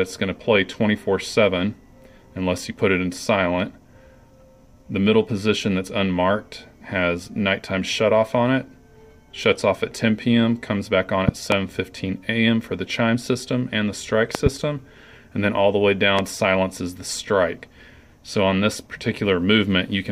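Loud pops occur at 11.29 to 11.55 s and 14.35 to 14.49 s, each a double pop about 20 dB above the sound, then a single one at 16.19 to 16.21 s. Each is likely a sudden voltage spike, such as static or a switching glitch, heard as a sharp thump while the sound continues underneath.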